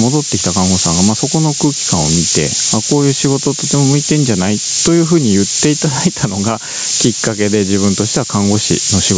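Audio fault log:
Throughout: low bit depth with noise shaping. A steady, thin hiss sits under the speech and grows much brighter toward the top of the band, which the call's microphone processing cuts off at 8 kHz. The grain is coarse enough to fit a 3-bit signal. Rounding error from so few steps is fed back and pushed upward in frequency. The noise is about 10 dB above the speech.
Throughout: gain pumping. The level swings by around 10 dB. Loud and quiet parts of the speech end up close together, so the sound feels squashed and breathing. The likely cause is input gain set far too high for the microphone. A fast limiter or compressor then pulls the level down on every peak and releases it in the gaps.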